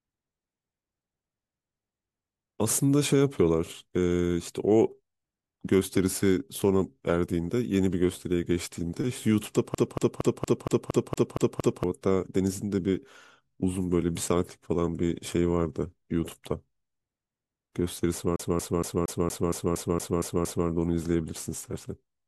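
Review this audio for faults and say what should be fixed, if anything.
From 9.75 to 11.84 s and 18.36 to 20.68 s, a CD stuck on one turn makes the speech stutter. A scratch knocks the laser back a track, so one 0.23 s slice replays nine, then ten times. Waveform and spectrogram show identical blocks repeating every 0.23 s, split by thin silent gaps. Cleaning the disc and re-ripping it with an error-correcting ripper would prevent this.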